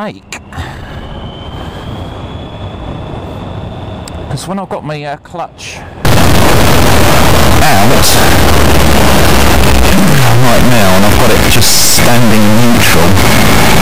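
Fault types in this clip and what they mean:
Integer read as float: from 6.05 s to the end, 32-bit integer samples are decoded as 32-bit floats, so values land near zero or far past full scale; the waveform slams between silence and clipped rails, and the spectrogram shows dense broadband harmonic striping of a harsh, buzzing square wave.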